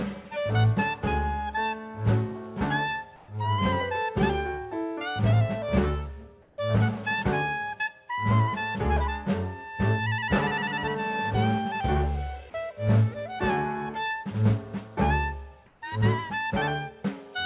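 Three brief patches of comfort noise in place of the background occur at 3.16 to 3.28 s, 6.42 to 6.58 s and 15.66 to 15.82 s. Each lasts 120 to 160 ms. The quiet background, about 30 to 35 dB below the loud parts, turns flat and featureless. Its level shifts by about 1 dB up, then about 3 dB and 2 dB down. The likely cause is discontinuous transmission, with the receiver synthesising noise during pauses. Nothing above 4 kHz, which points to a G.711 call codec.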